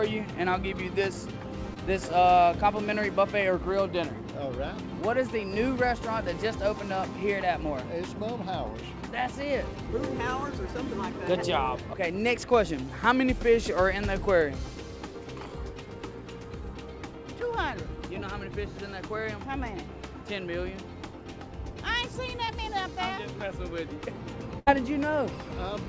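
At 1.74 to 1.78 s and again at 22.46 to 22.52 s there is short concealed packet loss. About 20 ms of audio failed to reach the decoder in time each time. The receiver bridged the hole by extending the preceding sound, from its pitch or as shaped noise, then blended back, leaving a brief smear or wobble.

At 24.59 to 24.68 s comes a burst of packet loss. A run of packets was lost or arrived too late, and the receiver filled a 74 ms gap by continuing the last sound while turning it down. This becomes a held buzz or a fading hiss, and 80 ms of audio is skipped before playback resumes. Throughout, the call codec passes nothing above 8 kHz.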